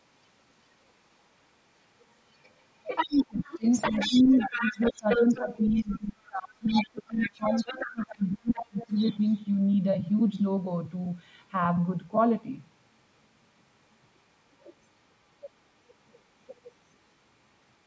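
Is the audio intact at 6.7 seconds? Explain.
No. At 6.7 seconds the clip is inside a stretch of speech suppressed in double talk, which runs from 3.06 to 8.93 s. The talker's level keeps dipping and breaking up through this span. At its deepest it falls by around 25 dB. In total roughly four seconds are pulled down. The likely cause is an echo canceller facing both sides talking at once. It could not tell the near talker from loudspeaker echo, so it attenuated everything.

Right at that moment, the other side's voice is also leaking through. It is a brief scrap from 6.67 to 6.85 s. It sits only slightly below the talker, about 5 dB down. It likely comes from the far side playing on the talker's loudspeaker and reaching the microphone. The echo canceller left that residue in the signal instead of removing it.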